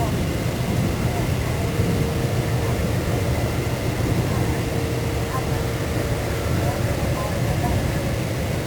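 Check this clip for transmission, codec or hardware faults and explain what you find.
There is one fault, and it runs through the whole clip: low bit depth without dither. The audio sounds grainy and rough from start to finish. Quiet passages turn gritty, and the faintest parts sputter or drop out to silence. The likely cause is heavy quantisation, which fits about 4 bits, with each sample rounded to the nearest step and no dither added. Because the error tracks the signal, the distortion shifts with the sound. It sits only about 15 dB below it.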